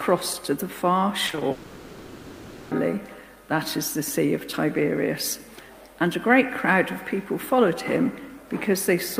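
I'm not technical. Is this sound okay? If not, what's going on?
No. Repeated packet loss (robotic sound) hits from 1.27 to 1.43 s: four short holes, each about 20 ms, break the audio, and the player covers each by stretching the last bit of sound. Half of this stretch is patched, so it sounds choppy.

A long network dropout likely follows, from 1.51 to 2.73 s. For about 1.2 seconds the real audio is missing, and a drawn-out continuation of the previous sound fills the whole gap without going silent. The lost part never returns when the audio resumes.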